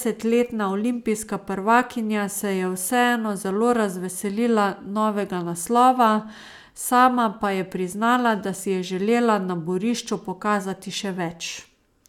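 No technical faults occur at any point in the speech.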